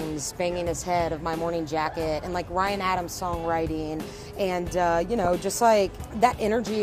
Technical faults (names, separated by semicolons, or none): DAB burbling